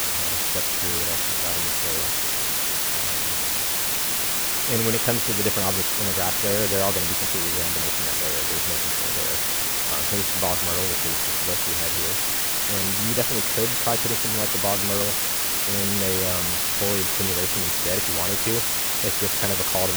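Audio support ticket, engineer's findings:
Constant, even hiss across the whole clip, noise nearly level with the signal, no distortion on top. Low bit depth with dither: rounding to very few levels, fits roughly 3-bit quantisation, with dither turning error into steady white noise.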